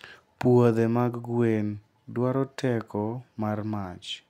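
Speech recording with no audible technical faults anywhere in it.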